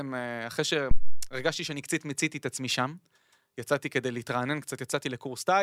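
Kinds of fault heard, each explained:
Phantom power thump: supply voltage switched on or off on a live input pushes a step through the coupling capacitors, giving a deep thump near 0.91 s, peaking about -10 dBFS, decaying within 97 ms.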